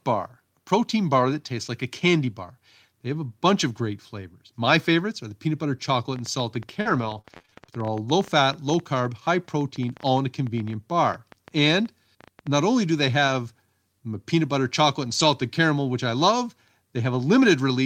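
Speech with three kinds of transmission fault. The likely cause of a train of clicks from 5.92 to 12.63 s is interference or a faulty connection or power supply, which puts roughly 70 irregular ticks, about ten per second, over the speech and pauses at peaks about as loud as the voice. Repeated packet loss from 6.81 to 7.70 s leaves nine holes, the longest 38 ms, each patched by stretching the last sound, so speech turns choppy and robotic. A lost packet rebuilt from error correction at 13.28 to 13.30 s, and five separate packets rebuilt the same way from 15.08 to 15.26 s, play low-bitrate copies without a gap, sounding briefly rougher and noisier.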